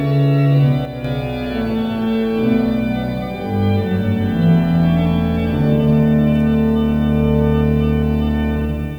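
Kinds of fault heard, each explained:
Sudden gain jump: From 0.85 to 1.05 s the sound and its background noise drop together by about 5 dB in a single step, then return just as abruptly. The likely cause is a digital gain change applied instantly, with no ramp.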